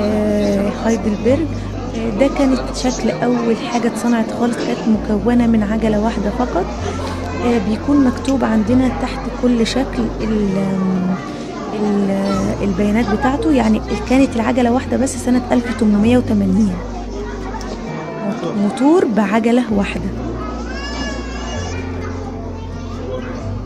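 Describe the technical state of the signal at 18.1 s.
At 18.1 s the signal is intact, with no dropout, distortion, glitch or other fault audible at that point.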